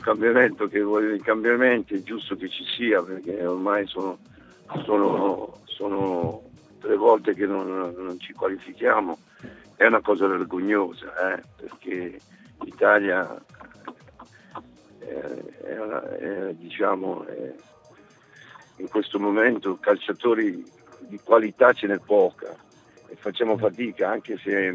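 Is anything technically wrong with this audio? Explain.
No, nothing is technically wrong.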